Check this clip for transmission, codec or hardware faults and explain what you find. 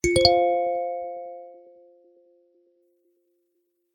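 There's one fault here: the adaptive stream dropped to a lower bitrate from 0.82 to 2.82 s. For those two seconds the player evidently switched to a much leaner encode, which is what happens when the connection slows. You hear an abrupt loss of top end, with nothing above about 3.3 kHz, plus swirly codec artefacts. The sound is consistent with an MP3 stream falling from roughly 128 to 24 kbit/s. Quality snaps back just as suddenly, with no gap either side.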